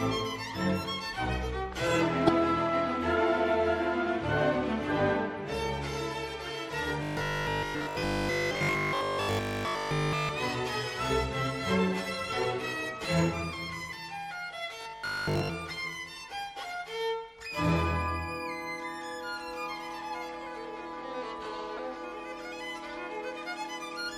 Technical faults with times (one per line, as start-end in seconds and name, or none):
2.27-2.30 corrupt frame decoded
7.03-10.29 robotic sound from repeated short buffers
12.42 corrupt frame decoded
14.81-15.52 robotic sound from repeated short buffers
21.77-21.79 corrupt frame decoded